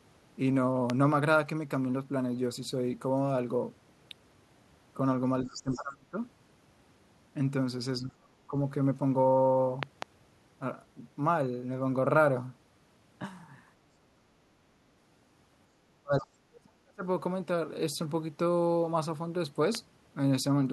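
A speech recording with three kinds of fault. A loud pop lands at 0.90 s, a pair at 9.83 to 10.04 s, and another at 19.75 s, roughly 15 to 20 dB above the speech. These are likely voltage spikes from a switch, plug or static. Each shows as a thin full-height vertical line on the spectrogram and a tall spike on the waveform, with the speech continuing beneath. From 5.45 to 5.82 s, the other side's voice leaking through comes in faint, around 15 dB under the speech. This is likely loudspeaker echo that the canceller left behind, and it shows as a weaker second harmonic pattern. Speech suppressed in double talk hits 5.46 to 6.18 s, 7.99 to 8.54 s and 15.87 to 17.04 s, with drops of roughly 30 to 40 dB. The likely cause is the echo canceller clamping down while both sides spoke. On the waveform these appear as hollowed-out stretches, and on the spectrogram as gaps.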